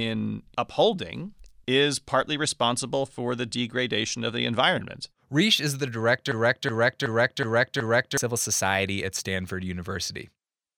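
From 6.32 s to 8.17 s the speech freezes into a system hang loop: the driver stalled while the hardware kept replaying its ring buffer. One 371.5 ms fragment, which fits a 16384-sample buffer, repeats five times at 2.69 Hz, giving a stuttering, machine-gun-like chop, and about two seconds of speech are lost. A waveform or spectrogram shows identical blocks tiled end to end, each with an abrupt edge at the seam.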